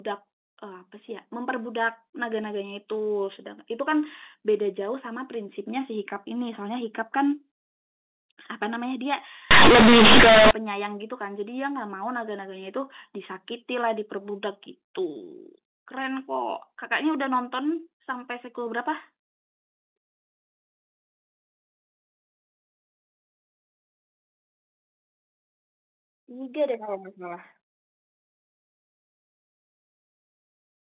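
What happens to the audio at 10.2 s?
At 10.2 s you're in the middle of a burst of companded audio read as linear, from 9.51 to 10.51 s. The mu-law bytes get played as raw 8-bit samples with no expansion, so quiet bits blow up to be as large as loud ones and the speech turns into harsh, buzzy distortion with loud hiss in the gaps.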